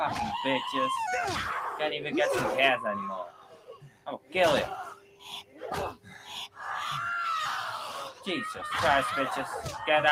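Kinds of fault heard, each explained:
Noise suppressor applied to music or sounds: a suppressor tuned for speech stays active across the whole clip and treats sustained, steady content as noise. The result is gain riding over a swing of roughly 10 dB, so held sound and decays sink while transients pass, giving an uneven, pumping level.
Sound cut by the noise suppressor: at specific moments the suppressor pulls this sound down harder than its surroundings. The main dip runs from 3.24 to 4.34 s, reaching about 12 dB. Shorter cuts of about 10 to 11 dB follow at 4.95–5.25 s, 5.43–5.62 s and 5.94–6.27 s.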